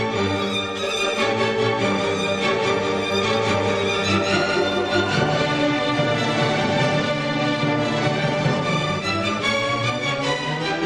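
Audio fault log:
1.08–7.00 s, doubled audio track: a second full-band copy of the sound sits around 200 ms behind the original, roughly 5 dB quieter, giving a flat slapback with no decay or room colour. It cuts in abruptly at 1.08 s and drops out just as suddenly at 7.00 s. The likely cause is the same signal reaching the mix twice, once through a slower capture path, or an edit leaving two copies out of step.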